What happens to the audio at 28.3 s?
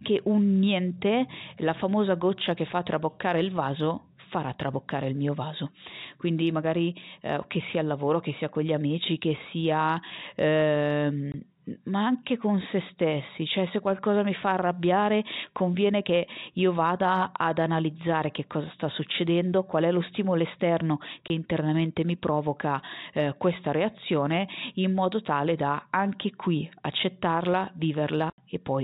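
Packet loss filled with silence hits at 28.3 to 28.38 s, right after "da anche qui accettarla": an 80 ms stretch of speech goes missing and the receiver plays dead silence in its place, which fits four lost 20 ms packets. The gap has hard, abrupt edges.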